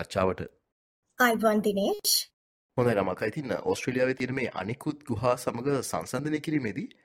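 At 4.20 s and again at 6.19 s the sound briefly skips ahead, caused by overlap between stream segments: the two-second segment boundaries were trimmed, discarding a few milliseconds of real audio. Unlike a dropout, no silent gap appears, only a waveform jump.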